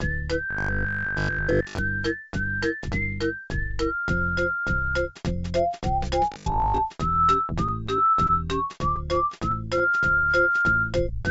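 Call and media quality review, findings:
Robotic sound from repeated short buffers, 0.51–1.79 s and 6.32–6.80 s: rigid metallic buzz locked at 50 Hz, likely a 20 ms buffer replayed while fresh audio is skipped. The steady fixed pitch separates it from loss concealment.

Scattered short gaps, 7.68–8.31 s and 8.73–9.82 s: about four, then about seven brief ticks or smears. These are late or lost packets in the jitter buffer, each hole of up to 20 ms patched by continuing prior sound. Isolated hiccups, no sustained buzz.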